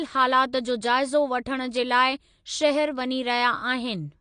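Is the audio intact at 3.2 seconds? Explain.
No. Likely AAC compression throughout: coarse low-bitrate quantisation strips everything above 9.8 kHz at 3.2 s, leaving the speech plainly dull and smeared.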